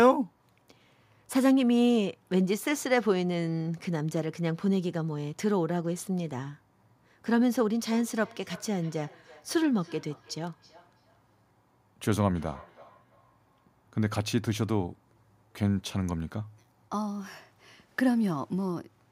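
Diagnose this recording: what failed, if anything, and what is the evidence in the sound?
A second device's microphone re-captured call playback its canceller ignores, causing feedback echo between two devices: from 7.82 to 13.77 s, speech recurs about every third of a second, about 25 dB down.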